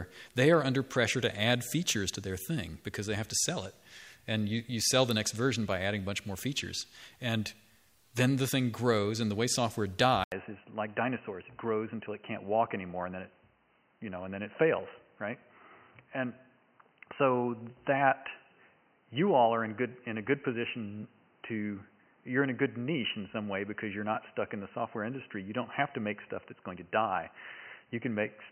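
At 10.24 s the audio drops out for about 80 ms and comes back noticeably duller and boxier, with nothing above 3 kHz, and it stays that way to the end. Loudness barely changes, but a new background noise floor appears, roughly 40 dB below the signal. The abrupt band-limiting, the short gap and the changed noise character point to a likely input switched to a poorer device, such as a headset in call mode.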